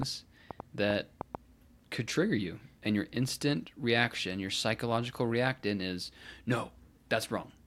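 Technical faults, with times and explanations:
0.03–1.36 s, train of clicks: about seven sharp, similar-shaped ticks at an irregular 3.8 per second, peaking roughly 15 dB above the speech, likely from electrical interference or a faulty connection. Unlike dense crackle, these are sparse, separate, repeated pulses.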